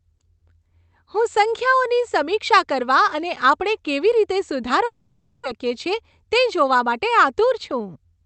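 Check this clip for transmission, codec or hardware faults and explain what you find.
Two faults stand out in this speech clip, both from the network side.

At 4.85 to 5.47 s, right after "અને આપણે કેવી રીતે", there's a long network dropout, likely from packet loss. The receiver stretches the last sound into a fading buzz, and about 0.4 s of speech never returns.

From 5.64 to 8.22 s comes a jitter buffer speed-up. The backed-up buffer trims pitch-period slices, roughly 150 ms in total, so speech runs about 6% faster at unchanged pitch and sounds a bit hurried.

The Opus call path tops out at 8 kHz, which gives the audio its band-limited character.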